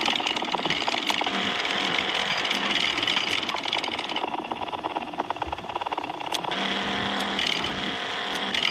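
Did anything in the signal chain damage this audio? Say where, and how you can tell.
No, nothing in the signal chain has left an audible mark on this audio. Every stage from capture to playback passes the sound along without any damage I can hear.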